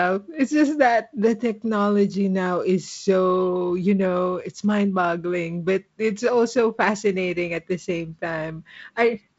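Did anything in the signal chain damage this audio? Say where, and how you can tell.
No, nothing in this speech clip stood out on listening as damage from any stage of the chain.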